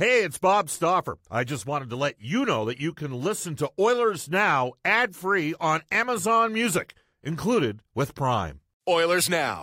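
No technical faults can be heard anywhere in the speech.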